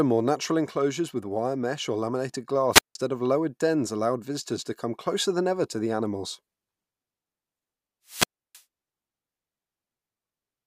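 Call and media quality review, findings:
Hiss swell, near-silent hole, speech back: 2.71–2.95 s (after "wire mesh or laminated", 170 ms mute), 8.06–8.63 s (314 ms mute). Wireless microphone squelch dropout: RF fade, receiver squelch muting output.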